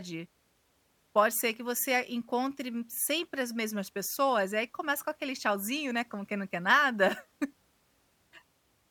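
No technical faults can be heard anywhere in this speech recording.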